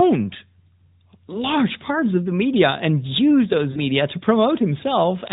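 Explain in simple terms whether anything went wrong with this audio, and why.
Lost AMR speech frames, at about 3.72 to 3.82 seconds. The call's radio link corrupted a short stretch of data, and the phone's decoder couldn't trust it. Instead of going silent, it repeated the last good sound with falling strength, so the speech briefly smears and dips before recovering. The gap heard is about 40 ms, which fits two lost frames. Throughout, the narrowband mobile codec keeps everything below 4 kHz.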